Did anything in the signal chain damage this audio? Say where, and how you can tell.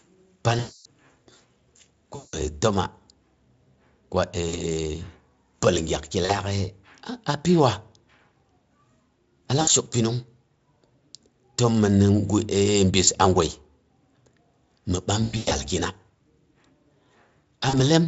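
Yes, at the network stage: VoIP packet loss concealed by the speech codec, eight times. Gaps fall at 0.59–0.85 s, 2.15–2.38 s, 4.49–4.60 s, 6.25–6.40 s (right after "pəal gyakg ki"), 9.61–9.70 s (just before "shok pəallong"), 13.05–13.08 s (before "a gwai"), 15.23–15.54 s and 17.69–17.81 s. At each one the Speex decoder, which shows no more than faint damage elsewhere, keeps extrapolating its last pitch and filter with falling gain. The longest stretch is 260 ms at 0.59 s. The 15.23 s patch is choppier, with losses spread over about 280 ms, the longest run being 100 ms. The short 20 to 60 ms dropouts fit 20 ms packets.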